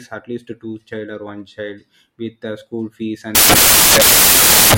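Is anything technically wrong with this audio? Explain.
Yes. From 3.35 s to the end, samples are built from the wrong bytes: misassembled byte order turns the low bits into loud white noise, a flat full-band smear on a spectrogram and a solid waveform block.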